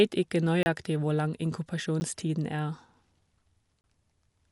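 Speech recorded with a dull, band-limited character throughout: nothing is present above about 11.4 kHz, and a rough, fluttering noise clings to the tonal parts of the voice. That combination is plainly audible codec damage and points to Dolby Digital compression, likely at a low rate that fits around 64 kbps, where the encoder narrows the band and leaves many frequency lines without mantissa bits, so the decoder fills them with dither noise. Three blocks of digital silence also break the signal. The first runs from 0.63 to 0.66 s, a 30 ms hole just before "hvor lang". The second is a 10 ms dropout at 2.0 s, short enough to register mostly as a tick. The third spans 3.81 to 3.84 s, again 30 ms. Each time the sound cuts out and returns without any fade. That points to samples replaced by zeros, most plausibly an output buffer that was not filled in time.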